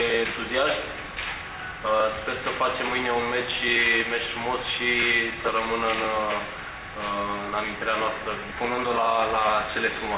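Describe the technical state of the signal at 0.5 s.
At 0.5 s the signal is intact, with no audible fault at that point.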